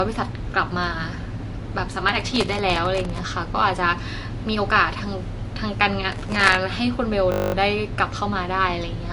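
Throughout, the speech sounds watery and swirly, with nothing above 11.3 kHz; this is likely MP3 compression at a low bitrate, around 48 kbps, starving the treble and weak detail.

From 2.09 to 3.18 s and again from 6.12 to 6.55 s, a gritty crackle tears across the speech. This is processor overload crackle: dozens of sub-millisecond buffers missed deadlines in a row, each replaced by stale audio.

From 7.32 to 7.54 s a steady 50 Hz buzz takes over. This system hang loop is one 20 ms slice of audio repeated 11 times while the system froze.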